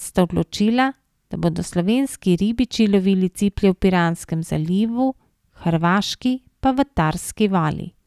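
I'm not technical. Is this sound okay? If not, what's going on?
Yes, it's fine: nothing in this recording sounds broken or glitchy, so there's nothing to worry about here.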